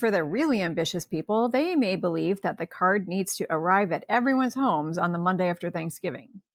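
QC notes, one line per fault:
Nothing to flag here; I listened through the whole speech clip and didn't hear a single problem worth a line.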